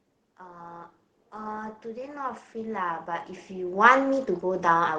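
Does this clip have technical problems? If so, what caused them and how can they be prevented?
Yes. Automatic gain rising: from 0.22 s to the end, the gain control treated the input as too quiet and kept raising it, so speech and background swell together. Setting a proper input level beforehand, or disabling or slowing the automatic gain control, prevents it.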